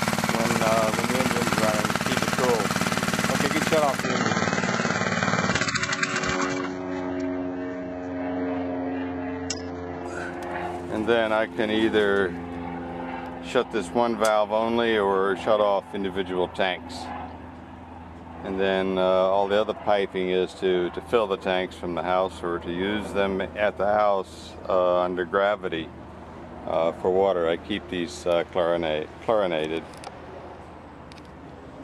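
At 4.03 s the sound suddenly drops to a lower-bitrate version of the adaptive stream, the kind of switch a player makes when the connection slows. Everything above 8 kHz vanishes and the top turns thin, which fits a very low-rate HE-AAC stream. Full quality snaps back at 10.03 s, with no gap at either switch.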